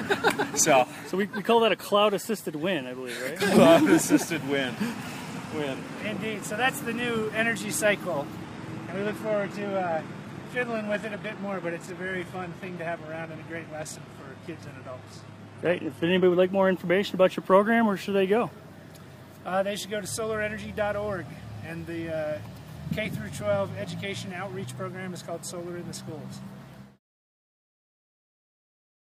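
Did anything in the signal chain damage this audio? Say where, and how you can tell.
Yes. The damage is at the network stage: an adaptive stream at a lower bitrate from 8.42 s to 16.42 s. For those 8 seconds the sound loses its top end, with nothing above 12.3 kHz, and the remaining treble turns swirly and synthetic, which fits a switch from a higher-bitrate stream to a very low-bitrate, bandwidth-extended one. The change is abrupt in both directions with no gap or stutter, which sets it apart from packet loss or a buffer underrun.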